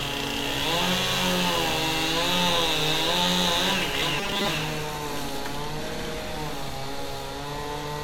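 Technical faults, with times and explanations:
4.01 s, compressed frames skipped. The sound jumps forward at this point, losing about 50 ms of audio. That gap fits two whole frames of 23.2 ms each going missing, either absent from the file or rejected by the decoder as damaged. The sound resumes slightly ahead of where it left off.
4.18 to 4.48 s, robotic sound from repeated short buffers. For about 0.3 s the sound turns into a rigid, metallic buzz with a fixed pitch of 200 Hz. It still loosely follows the shape of the audio underneath. The likely cause is new audio arriving too slowly, with the software looping the last short chunk to fill the time. A 200 Hz buzz points to chunks about 5 ms long. Most of the real audio in this stretch is skipped.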